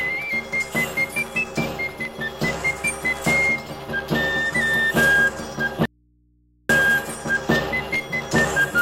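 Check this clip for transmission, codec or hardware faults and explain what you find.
One fault: an audio dropout to a faint residue from 5.85 to 6.69 s. For about 0.84 s the wanted signal stopped reaching the chain while the path beyond the break stayed live, likely an interrupted connection at the input feeding an open, ungrounded stage. The sound cuts off abruptly rather than fading, and the gap holds only mains hum, roughly 40 dB below the normal level, before the signal snaps back in mid-flow.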